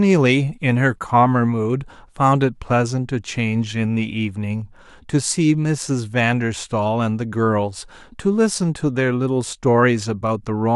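Speech recording with no audible technical faults.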